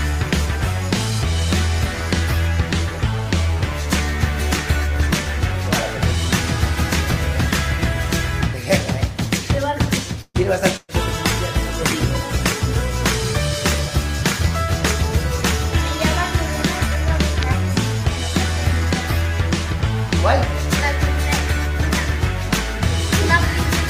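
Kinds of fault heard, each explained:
Call audio freeze: Around 10.21 to 10.37 s the sound stalls and the last bit gets stretched into a fading buzz or hiss, with about 40 ms of near-silence at the tail, roughly 130 ms in all. Nothing seems to be skipped afterwards; it just picks up where it left off, a bit later than before. That pattern points to packets likely being held up in transit until the jitter buffer ran dry.
Burst of packet loss: At 10.76 to 10.91 s there's a second hole, this time about 120 ms of audio that's genuinely gone. The receiver papers over it by carrying the last sound forward and letting it fade, dipping to silence for the final 20 ms or so. When the audio comes back it has jumped ahead, so the piece that belonged in that gap never turns up.
Call bitrate drop: Right after that, from about 11.02 to 12.74 s, the encoder gets squeezed from 40 kbps down to 17 kbps and sits at the bottom for around 1.7 s. 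With that few bits the codec has to code much more coarsely and shave off the top end, so this stretch sounds rougher and duller until the bitrate climbs back.
Jitter buffer speed-up: Between 17.59 and 18.01 s the receiver decides it's holding too much audio and trims it back, snipping out tiny pitch-period-sized slices again and again, about 40 ms worth altogether. The pitch stays put, but the audio plays roughly 7% fast through that patch, so it comes across as slightly hurried for under half a second.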